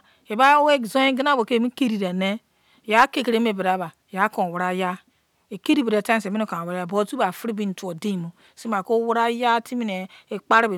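No technical faults can be heard anywhere in the recording; the speech signal stays continuous and stable throughout.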